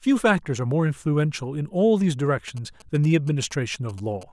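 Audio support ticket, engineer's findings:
GSM signalling bursts, 2.48 to 4.23 s. Galloping dit-dit-dit of short buzzes at about 217 Hz, roughly 25 dB under the speech. Cause: nearby 2G handset in signalling state, sending brief groups of radio bursts. Mechanism: RF picked up on mic or line cabling, rectified at an unprotected semiconductor junction in the input stage, demodulated envelope lands in the audio band. Probable component: preamp input lacking RF filtering or shielding.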